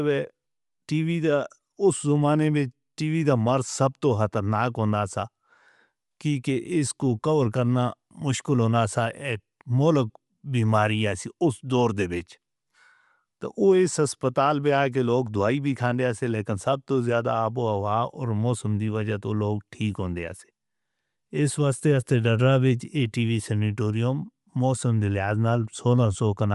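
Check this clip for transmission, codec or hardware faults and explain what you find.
One codec fault runs through the whole recording. From start to finish the speech has a breathy, grainy edge, with plainly audible codec damage and nothing above about 11.6 kHz. The likely cause is Bluetooth LC3 compression, the LE Audio transform codec. It codes the signal in short blocks, consistent with 10 ms frames, and at a rate that fits around 48 kbps it discards much of the upper spectrum and substitutes shaped noise, producing that rough top end and the hard band limit.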